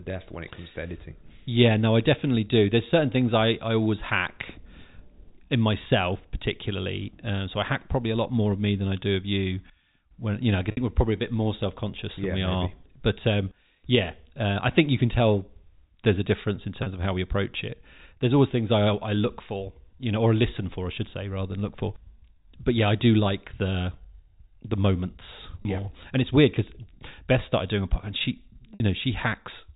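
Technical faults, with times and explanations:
10.71–10.77 s, 16.83–16.86 s, 25.62–25.65 s and 28.74–28.80 s, packet loss with pitch repetition: audio went missing (60, 30, 30 and 60 ms, which fits one or two packets of about 30 ms each). The receiver refilled each gap by repeating the last pitch period, so the 30 ms gaps briefly hold on a buzzy, sustained tone and the 60 ms gaps fade into silence before the speech cross-fades back, after "you know I", "there's a difference in" and "the moments".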